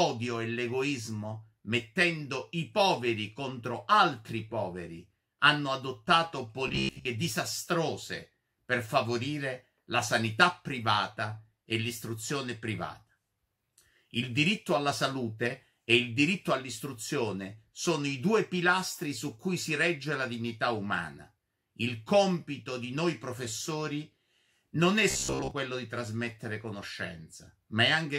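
From 6.68 to 7.05 s, and again from 25.11 to 25.51 s, the sound collapses into robotic sound from repeated short buffers: a rigid, metallic buzz at about 66.7 Hz. That pitch matches a 15 ms chunk being replayed, most likely because new audio arrived too late and the last buffer was looped while most of the real material was skipped. A spectrogram shows evenly spaced harmonic lines at 66.7 Hz multiples, and the waveform shows an identical short shape repeating.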